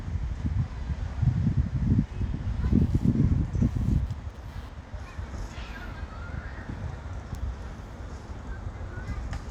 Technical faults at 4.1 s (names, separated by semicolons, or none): computer activity noise